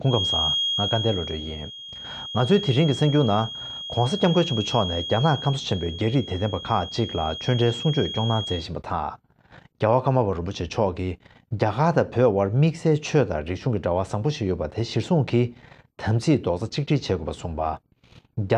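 A feedback whistle runs from the start of the clip to 8.70 s: a thin, steady tone at 3.3 kHz sits behind the sound, roughly 10 dB beneath it, swelling and fading slowly in level before it stops. The likely cause is a loudspeaker-to-microphone loop held right at the edge of feedback, where the gain around the loop is just high enough to sustain that single frequency but not enough for it to build into a howl.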